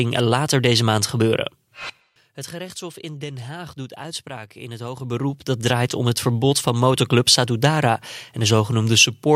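A gain ramp applied in unsmoothed 2 dB jumps, about ten a second, causes zipper noise: after "later deze maand", from 1.32 to 2.52 s, the level falls by roughly 15 dB with a ticking rasp, then climbs back just as roughly from 4.8 to 5.76 s, between "doet uitspraak in het" and "om het verbod van".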